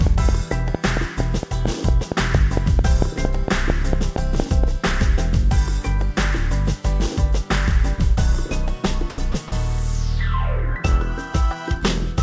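From 0.07 to 4.65 s, a train of clicks runs over the sound. About twenty pulses arrive at a regular 4.4 per second. They stand well above the material and tick through pauses too. The likely cause is electrical interference or a struggling interface.

At 9.10 s, comfort noise replaces the background for 80 ms, until 9.18 s. The real background sits about 21 dB below the loud parts. It gives way to a smooth, featureless hiss at the same level. The sender likely stopped transmitting during the pause.

At 9.32 s, sound is dropped by the voice detector. For 20 ms the sound vanishes into steady synthetic noise, then returns. The detector likely mistook quiet sound for background and cut transmission. The call path passes nothing above 8 kHz, which fits G.722 at 64 kbps.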